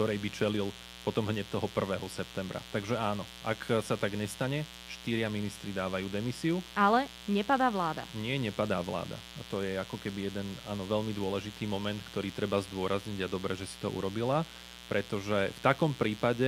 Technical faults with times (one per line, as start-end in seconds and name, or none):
0.00-16.47 mains buzz